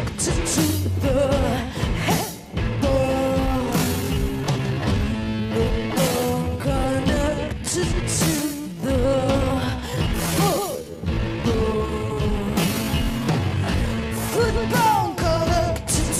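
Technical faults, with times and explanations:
3.24 to 14.62 s, time-stretched section: the pace suddenly slows to about two-thirds speed with pitch unchanged, so it drags, likely from software repeating short pieces to fill time.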